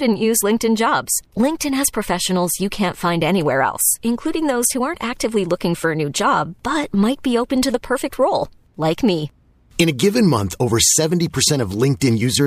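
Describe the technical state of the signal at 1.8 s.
At 1.8 s the speech signal is intact, with no audible dropout, clipping, distortion or other fault at that moment.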